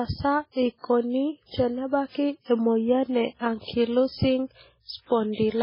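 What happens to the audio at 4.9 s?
The speech at 4.9 s has a watery, swirly sound and no content above 5.3 kHz, as across the whole clip. Likely MP3 compression at a very low bitrate, near 16 kbps, cutting treble and dropping weak frequencies.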